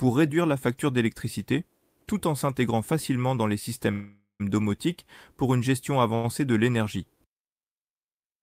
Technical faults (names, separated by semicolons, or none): call audio freeze; short stall from a late packet